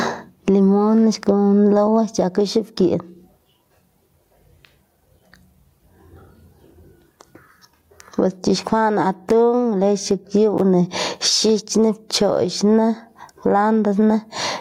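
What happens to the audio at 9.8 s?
At 9.8 s you're hearing gain pumping, which runs through the whole clip. The gain swings by around 20 dB, pulling down whenever the speech gets loud, so loud and soft parts end up closer in level and the sound is squashed. That's likely input gain set way too hot, with a fast limiter clamping down on each peak.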